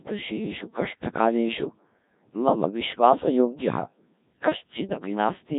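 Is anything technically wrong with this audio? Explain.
Yes. Throughout, the speech carries heavy Codec 2 vocoder damage. It is rebuilt from sine waves using only pitch, voicing, energy and envelope, which sounds robotic and buzzy rather than warbly like a waveform codec and fits about 1.3 kbit/s.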